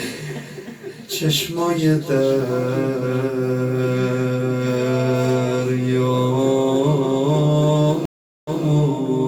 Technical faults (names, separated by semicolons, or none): stream reconnect